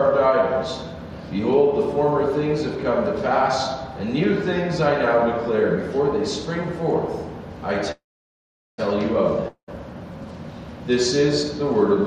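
Call audio freeze at 7.91 to 8.80 s: the last sound carries on briefly as a fading buzz or hiss, then about 0.78 s of silence, before the audio resumes exactly where it stopped, nothing lost but everything after it running about 0.87 s late, likely because delayed packets starved the jitter buffer.

Long network dropout at 9.48 to 9.70 s: the sound again trails off into a fading buzz or hiss and about 0.1 s of silence, but when it returns, about 0.2 s of audio is simply gone, likely because those packets never reached the receiver at all.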